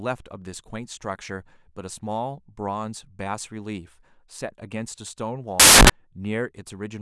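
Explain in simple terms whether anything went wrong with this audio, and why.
A loud burst of hiss replaces the speech from 5.60 to 5.90 s. These are samples built from the wrong bytes: the player misread how each sample's bytes fit together.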